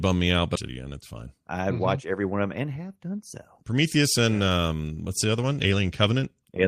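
At 0.55 to 0.57 s a skip ahead drops about 0.4 s of speech with no silent gap, unlike a dropout, joining the sides abruptly after a stretch of audio was dropped. From 0.69 to 2.21 s a jitter buffer speed-up trims pitch periods, running 107% fast, losing about a tenth of a second, hurried yet pitch unchanged, unlike resampling.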